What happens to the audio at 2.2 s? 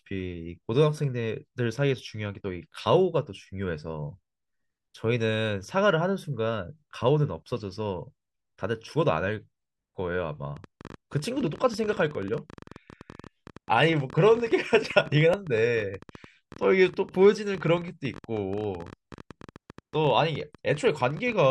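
Nothing goes wrong at 2.2 s; the speech runs through that moment intact, with no fault to be heard.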